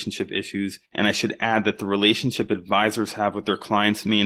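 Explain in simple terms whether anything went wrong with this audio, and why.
Yes, something went wrong. The whole clip, start to finish, has Opus voice compression damage, and it's plainly audible. Opus squeezes speech by modelling the voice with a simple prediction system and sending only a rough version of the buzz behind it, with a lighter layer for the upper frequencies. Squeezed this hard, that rough version shows: the speech comes out a bit hoarse and faintly robotic, like a heavily compressed call.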